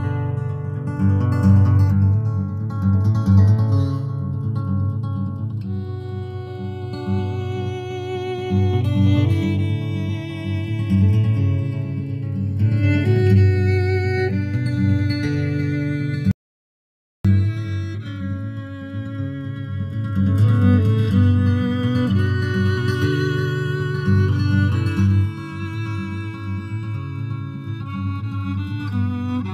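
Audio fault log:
Throughout: channels drifting apart. The left and right sides seem to run on slightly different clocks, about 20 parts per million off, so the gap between them creeps up to about 0.7 ms by the end. Fold it to mono and you get a slow flanging sweep.
16.31 to 17.25 s: audio dropout to silence. The sound cuts off abruptly and we lose about 0.93 s to silence, with no room tone at all. The likely cause is the input briefly vanishing while the recorder kept writing.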